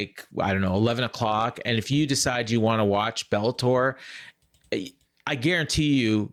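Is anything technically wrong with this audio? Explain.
Yes. There's clock drift between sender and receiver: the sending clock runs roughly 4% slow, so the receiver's buffer keeps draining throughout this speech clip.

From 0.12 to 5.96 s you get repeated timing corrections, with small pieces repeated to fill the gap, adding around 300 ms. It plays at 96% pace, with faint, uneven hiccups.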